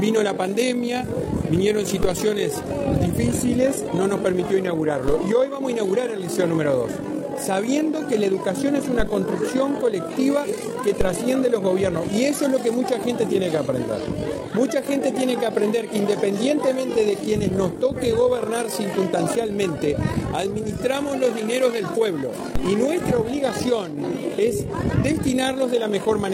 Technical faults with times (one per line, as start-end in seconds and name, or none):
0.00-26.34 overlap-add ripple
2.03 DC step
5.08 DC step
8.99 DC step
11.01 DC step
22.55 DC step